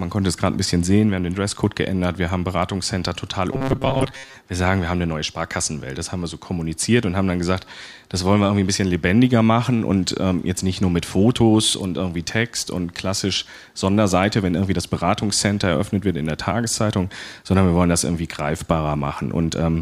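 Robotic sound from repeated short buffers runs from 3.53 to 4.34 s, where the speech collapses into a rigid, metallic buzz pitched at 134 Hz that only loosely tracks the syllables. The likely cause is audio arriving too seldom, with playback filling the gaps by looping the most recent fragment of about 7.5 ms. For most of that stretch the real signal is skipped, and the repetition rate imposes the fixed tone.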